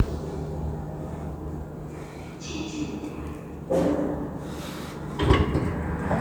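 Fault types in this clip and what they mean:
No faults are audible anywhere in this recording.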